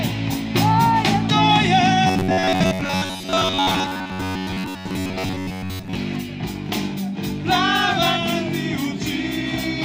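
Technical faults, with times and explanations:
2.07–5.97 s, robotic sound from repeated short buffers: a rigid metallic buzz at 93.8 Hz, likely from a 10.7 ms buffer repeated across most of the span.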